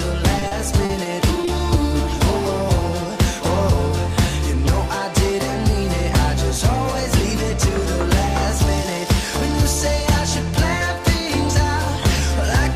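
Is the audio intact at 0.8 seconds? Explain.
No, 0.8 s falls inside a stretch of repeated packet loss (robotic sound) from about 0.39 to 1.49 s. Packets kept going missing, and each hole, none longer than 40 ms, got patched by stretching the previous sound, giving that choppy stutter.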